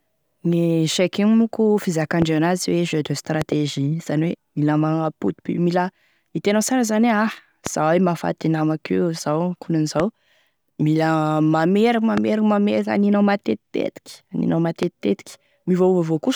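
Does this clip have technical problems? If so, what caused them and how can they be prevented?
Yes. Loud pops strike at 2.22–2.24, 3.42–3.54 (a double pop), 7.67–7.69, 10.00–10.02, 12.17–12.20 and 14.83–14.85 s, jumping roughly 10 to 15 dB above the speech, which continues underneath. A likely cause is sudden voltage spikes from a loose plug, switching, static or a driver glitch. Prevent them by securing connectors, grounding equipment and updating audio drivers.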